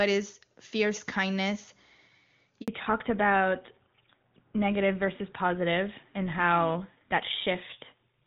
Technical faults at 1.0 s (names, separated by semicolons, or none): none